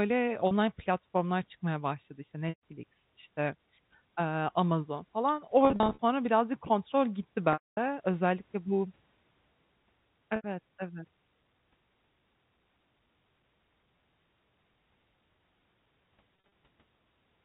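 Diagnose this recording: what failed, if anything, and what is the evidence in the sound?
Network stage: packet loss with pitch repetition, in the audio carried over the G.711 telephone path. Gaps fall at 0.47–0.51 s (before "platformlar çıkmaya başladı işte"), 2.49–2.61 s, 5.65–5.99 s (scattered, ending at "birazcık kontrol gitti"), 7.53–7.77 s (after "birazcık kontrol gitti"), 10.36–10.44 s and 16.47–16.5 s. The receiver loops the last pitch cycle: brief losses sound held and buzzy, while the 240 ms loss fades to silence. A spectrogram shows frozen harmonic stripes, and the waveform shows identical cycles decaying.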